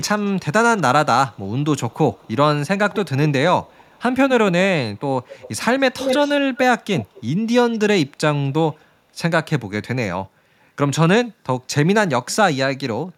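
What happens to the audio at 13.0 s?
Nothing goes wrong at 13.0 s: the speech carries on intact through that moment, with no dropout, click or distortion to be heard.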